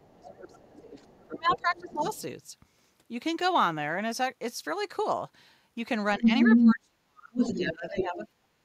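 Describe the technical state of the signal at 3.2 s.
At 3.2 s the speech signal is intact, with no audible technical fault at that moment.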